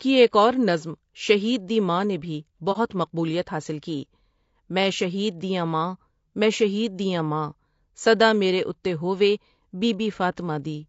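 Throughout, speech sounds rough and grainy, likely from low-delay AAC compression near 32 kbps; a spectrogram shows noise filling gaps between harmonics and a lowered or synthetic top band. At 2.72 to 2.77 s, AAC frame loss with muting leaves a brief dip, consistent with one dropped frame, seen as a tapered waveform dip.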